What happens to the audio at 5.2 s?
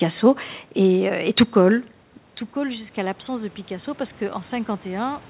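At 5.2 s the speech and the room noise behind it are still swelling together, part of a slow rise that begins at 2.54 s and runs to the end. This is automatic gain rising: after the input fell by about 12 dB, the gain control gradually turned itself up to compensate.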